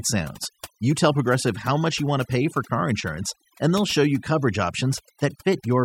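Overdone noise removal runs through the whole recording: the noise reduction was set far too hard, cutting individual frequency bands whenever they came close to its noise estimate. Quiet parts of the speech vanish with the background noise, leaving near-silent gaps flecked with twinkling specks.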